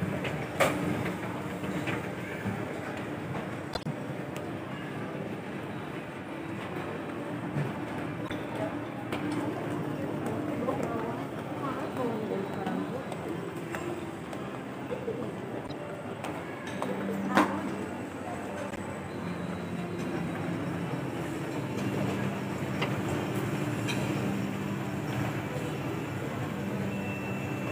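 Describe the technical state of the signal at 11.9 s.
At 11.9 s the signal is intact, with no technical fault present at that moment.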